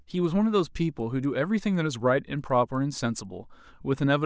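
Speech with faint regular ticks at 4 per second from start to end, only while there is signal: the resampler restarted on every block. Each 250 ms block was converted separately, likely from 24 kHz to 16 kHz, leaving a small error at every block edge.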